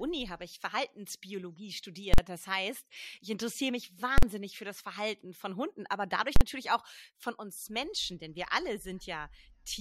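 Invalid numbers at full scale hit this speech recording three times, at 2.14, 4.18 and 6.36 s. Each time, a calculation yielded infinite or invalid values that were pinned to the maximum level for about 46 ms, which fits a 2048-sample block, so each event lands as a single loud bang.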